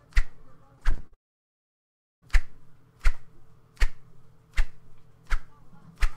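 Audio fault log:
0.75–1.14 s, repeated packet loss (robotic sound): six quick holes, the longest 51 ms, each patched by stretching the previous bit, so a third of it sounds choppy.
1.14–2.24 s, long network dropout: about 1.1 s of audio never arrived, likely a network stall. A brief fading tail gives way to near silence before the sound returns with that stretch missing.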